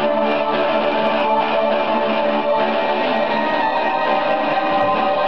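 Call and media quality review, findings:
No audible defects found on review; no action required.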